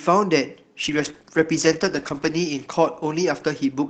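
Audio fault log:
0.84 s to end: call bitrate drop. Speech turns rough and watery, which fits the encoder falling from 48 to 13 kbps. Worst for 1.55 s.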